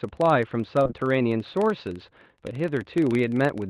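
Filter restarted on every block, throughout: the filter loses its state at each block boundary, so a buzz near 23.4 Hz, tracking the speech level, fits 1024-sample blocks. Short concealed packet loss, at 0.83 to 0.87 s and 0.87 to 0.91 s: two back-to-back gaps were filled by extending the preceding sound, leaving a brief smeared wobble.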